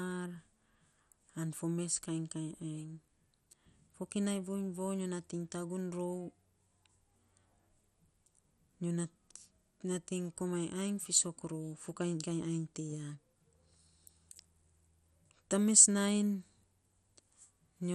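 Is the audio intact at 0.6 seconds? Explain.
No. At 0.6 s, as throughout the speech, there is MP2 compression, likely at a low rate around 64 kbps. Starved sub-bands drop out and the rest are coarsely quantised, so the sound is dull with nothing above 14.3 kHz, and a gurgling, granular grain is plainly audible.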